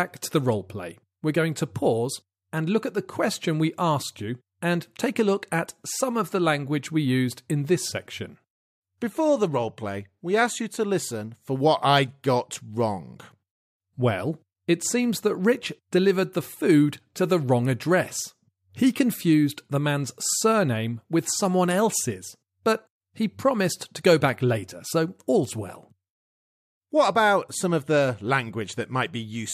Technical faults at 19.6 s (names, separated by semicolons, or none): none